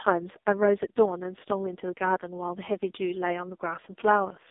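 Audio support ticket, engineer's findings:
Speech path forced through AMR narrowband mobile codec, whole clip. Heavy damage points to lowest AMR-NB mode, around 4.75 kbps. Line band 250 Hz to 3.7 kHz, nothing above 3.8 kHz. Sparse pulse excitation per subframe makes speech buzzy, synthetic.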